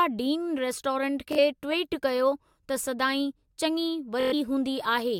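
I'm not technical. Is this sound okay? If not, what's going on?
No. The speech has Bluetooth stutter twice: at 1.33 to 1.39 s, right after "डीन रेस्टोरेंट", and at 4.21 to 4.34 s. Audio arrived late or went missing, so the receiver repeated its last tiny slice as a brief buzz. It then skips ahead, losing about 46 ms and 116 ms.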